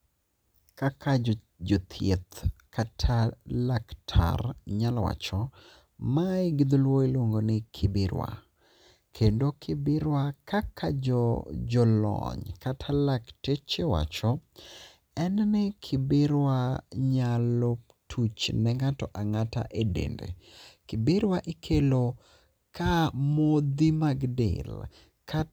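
No technical faults can be heard anywhere in the recording, so there are none to describe in time order.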